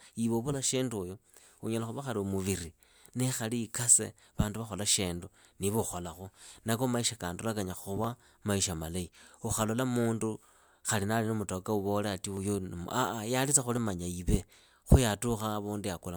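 Dropped samples occur at 4.93 s, between "nikhali ikase vandu vakhola" and "shindu ukholakhu"; at 8.04 s, after "maisha kandola kanyaa" and before "maisha malahi"; at 12.37 s; and at 13.77 s, after "ye alitsa". Each is a single sharp click in the speech. The likely cause is a tiny stretch of under a millisecond missing from the stream, making the waveform jump abruptly to a later value without removing any audible sound.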